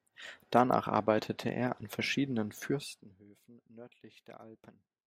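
Speech, with zipper noise from 2.64 to 3.24 s as the level falls by around 25 dB in unsmoothed 1 dB steps, about forty per second, each jump ticking. The waveform envelope looks like a staircase; a spectrogram shows faint, evenly spaced vertical lines.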